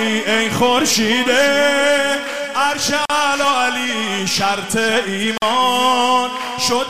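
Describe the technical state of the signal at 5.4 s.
A gap at a join of encoded pieces runs from 5.38 to 5.42 s, a silence of about 45 ms. Two separately encoded segments were butted together untrimmed, so the encoder's start-up delay and end-frame padding remain, cutting the continuous sound before it resumes where it stopped.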